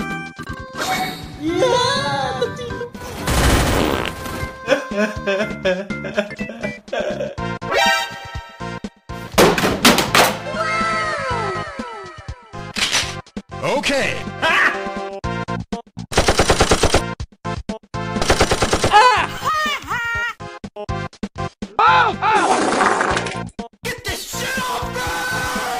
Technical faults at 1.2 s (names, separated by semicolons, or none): doubled audio track